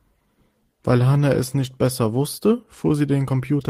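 No technical faults can be heard at any point in the recording.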